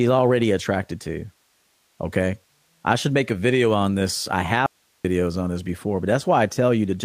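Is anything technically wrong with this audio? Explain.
Yes. From 4.66 to 5.05 s, after "video on this I", the speech cuts out abruptly, leaving only faint hiss some 45 dB down until "on this before". This audio dropout to a faint residue is likely a break in the source while the later path stayed live.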